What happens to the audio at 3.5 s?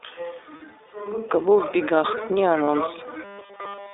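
At 3.5 s the audio is in the middle of a robotic sound from repeated short buffers, running from 3.24 s to the end of the clip. It is a rigid, metallic 200 Hz buzz that roughly tracks the speech. The likely cause is nearly all of the incoming audio being skipped while a 5 ms stretch is looped, so the loop rate imposes that fixed pitch.

Beneath this sits the iLBC codec damage present throughout. The line passes only about 300 Hz to 3.7 kHz, and the speech has a plainly audible rough, synthetic edge that fits 20 ms frames at 15.2 kbps. Unlike the buzz, this colouring is steady for the whole clip rather than arriving suddenly.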